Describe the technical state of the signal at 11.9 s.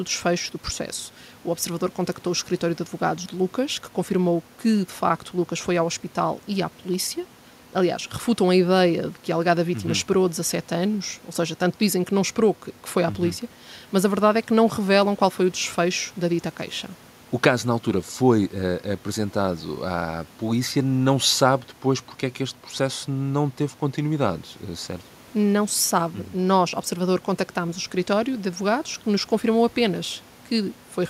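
At 11.9 s the speech signal is intact, with no audible technical fault at that point.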